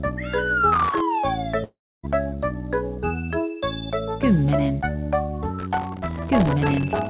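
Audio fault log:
0.72–1.00 s, processor overload crackle: the processor kept missing its deadlines for very short buffers, around 1.5 ms each, a few dozen times in a row. Each missed buffer went out as silence. The result is a quarter-second burst of gritty crackle made of tiny hard-edged gaps, heard over sound already limited to nothing above 4 kHz by the narrowband call codec.
1.64–2.05 s, long network dropout: about 0.4 s of audio never arrived, likely because of a network outage. The receiver stretched the last sound into a fading buzz, and after that only silence remains for roughly 0.29 s. The sound then resumes further on, and the missing stretch is gone for good.
5.59–7.10 s, processor overload crackle: the same overload comes back and lasts to the end of the clip. Well over a hundred of the short buffers, about 1.5 ms each, were missed and replaced with silence. This produces a sustained, tearing crackle of dense tiny dropouts for the final 1.5 s that never clears before the audio stops.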